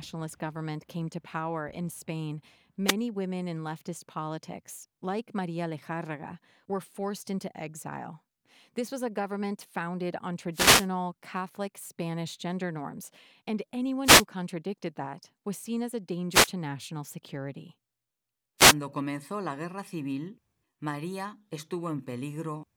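Wireless microphone noise hits occur at 2.85–2.95, 10.53–10.88, 14.03–14.25, 16.30–16.50 and 18.58–18.75 s. Reflected radio paths cancel and fade the FM link, so receiver noise swells into brief static swishes over the speech.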